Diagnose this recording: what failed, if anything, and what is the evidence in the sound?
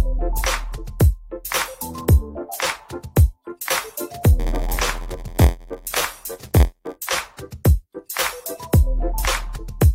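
A block size mismatch (padded) in the driver or buffer stage runs from 4.39 to 6.96 s. A buzz at 86.1 Hz appears, and the sound slows to 0.938× speed at about normal pitch. Each block is zero-filled at its end, consistent with 512-sample reads.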